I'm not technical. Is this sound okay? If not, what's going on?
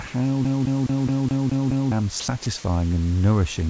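No. A CD stuck on one turn runs from 0.45 to 1.92 s: the same 210 ms slice of speech plays seven times in a row, with a tiny gap at each jump. It's the quick, even stutter of a skipping disc.

Sound dropped by the voice detector happens at 0.08 to 0.14 s, 2.20 to 2.28 s, and 2.44 s, just before "and nourishing." In each spot, a brief bit of speech gives way to faint, steady hiss. The likely cause is the sending side mistaking quiet speech for background and filling the gap with stand-in noise.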